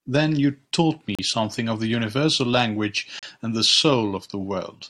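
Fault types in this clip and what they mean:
Gap between stream segments: the time stamps of consecutive stream segments fail to meet, leaving a short stretch with no samples, which the player fills with silence. In this speech the sound drops out abruptly for 36 ms at 1.15 to 1.19 s and again at 3.19 to 3.23 s, with hard edges on both sides. The holes recur about every 2 s, which points to 2-second segments, and each one adds time rather than removing any audio.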